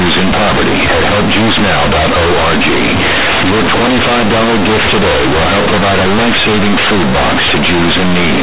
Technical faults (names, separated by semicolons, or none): companded audio read as linear